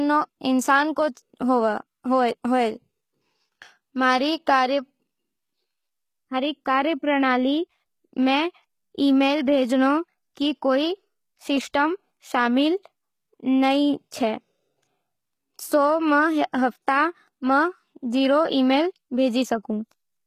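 HE-AAC compression runs through the whole speech clip, and is likely the cause of its plainly audible damage. Only the lower spectrum is truly coded, and the treble is rebuilt from copied lower bands, so sibilants sound gritty and metallic. Nothing reaches above 14.9 kHz, which fits a low bitrate around 20 kbps.

Pre-echo appears from 1.15 to 1.17 s, a smear lasting about 21 ms. A sharp attack fell late in a coding block, and the quantisation noise meant for the loud onset spread into the quiet moment before it, so a brief hiss leads in and the attack sounds softened.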